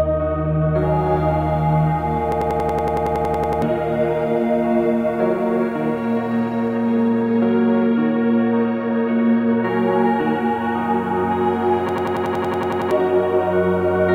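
A recording of everyday sound breaks into a machine-gun stutter from 2.32 to 3.62 s and again from 11.89 to 12.91 s, repeating one 93 ms slice about 10.8 times per second. This is a system hang loop: playback froze while the hardware kept replaying its ring buffer (consistent with a 4096-sample buffer), so roughly 1.5 s and 1 s of audio are lost.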